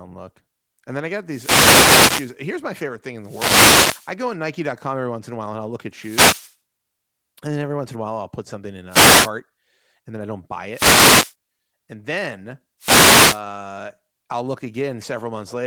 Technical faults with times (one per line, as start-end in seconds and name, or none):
1.26-2.36 wireless microphone noise hit
3.21-4.14 wireless microphone noise hit
5.93-6.56 wireless microphone noise hit
8.89-9.30 wireless microphone noise hit
10.71-11.35 wireless microphone noise hit
12.79-13.42 wireless microphone noise hit